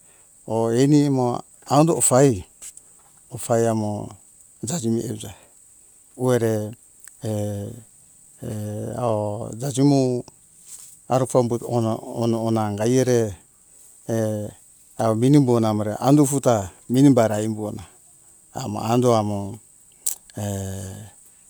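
Nothing in this speech recording needs flagging, since no technical faults turn up anywhere in it.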